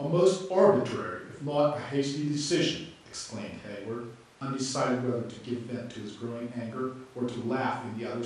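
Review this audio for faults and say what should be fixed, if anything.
Across the whole speech clip there's a dull, gurgling, granular edge that sounds like MP2 compression, and it's plainly audible. The likely cause is MPEG Layer II coding at a fairly low rate; the quality fits something around 80 kbps. At that budget the coder starves its upper sub-bands, so the top end switches off and flickers back in, and what's left is quantised coarsely, giving that grainy texture. To prevent it, keep an uncompressed master or encode at a much higher bitrate with a more efficient codec.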